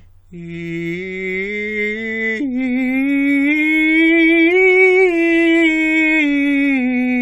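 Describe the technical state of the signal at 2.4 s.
At 2.4 s the music plays through intact, with no dropout, distortion or other fault to be heard at that point.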